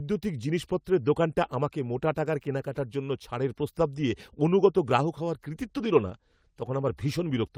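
A call bitrate drop from 5.59 s to the end pushes the Opus encoder from 32 to 18 kbps, so the speech turns coarser and muffled.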